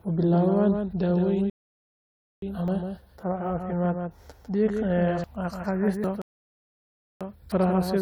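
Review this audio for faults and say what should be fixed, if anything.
A doubled audio track runs throughout. A second full-band copy of the speech trails by roughly 150 ms, about 5 dB quieter, with no room colour. A second capture path or misaligned edit is the likely cause. Record from a single path, or remove the stray copy in the edit.

A rebuffering stall cuts to silence from 1.50 to 2.42 s, just after "u bilaabaan daaweyn". Another runs from 6.22 to 7.21 s. Playback then resumes where it stopped, adding about 0.92 s and 0.99 s. Buffer more audio before playback starts, or lower the stream's bitrate.

Dropped buffers (overruns) sound as jumps ahead at 2.68, 5.24, 6.04 and 7.52 s. Most skip roughly 40 ms, and the one at 5.24 s skips around 100 ms. The likely cause is samples not being read before the hardware overwrote them. Enlarge the capture buffer or give the recording thread higher priority.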